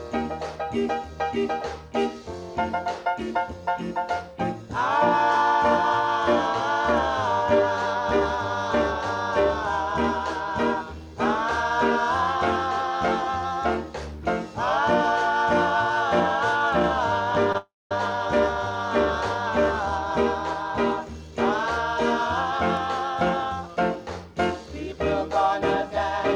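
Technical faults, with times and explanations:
17.52 to 17.55 s, short stall from a late packet. The sound holds too long for about 20 ms, with a faint buzz or dip. A packet was not there in time, and the jitter buffer ran dry. The receiver stretched the last bit of audio to cover the wait. When the packet came, playback resumed from the same point. Nothing is lost, but the timing shifts later by 20 ms.
17.57 to 17.92 s, call audio freeze. Right after the stall, the audio stops moving forward for 332 ms. The last sound carries on briefly as a fading buzz or hiss, then about 230 ms of near silence follows. The likely cause is packets held up in transit, leaving the jitter buffer empty. Playback then picks up where it stopped. No audio is missing, but a 332 ms gap has been inserted.
23.03 to 23.96 s, jitter buffer speed-up. For just under a second the audio runs about 6% fast, at the same pitch. 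It sounds slightly hurried. The buffer was holding more audio than its target after the earlier delays. To shrink it, the receiver cut many tiny pieces, each a pitch period or a few long. Roughly 70 ms was removed in total, pulling the delay back down.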